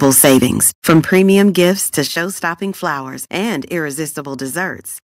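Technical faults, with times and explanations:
0.02 to 1.7 s, microphone overload: The loudest syllables carry a harsh, crackly edge because their peaks are squared off, the input likely driven about 12 dB beyond what the converter could hold. A few percent of samples were pinned at the converter's limit. On the waveform the tops look flattened. On a spectrogram the clipped moments show as broadband vertical smears of added harmonics reaching well above the voice's normal range.
0.05, 1.05 and 2.07 s, microphone volume stepped down: At each point the voice and the background noise floor both drop abruptly together, by about 2 dB, then about 8 dB, then about 7 dB, most likely because automatic gain control lowered the device's input volume after detecting the overloaded peaks. On the waveform the envelope narrows in a single step rather than tapering. On a spectrogram the whole band, noise included, darkens across a sharp vertical boundary.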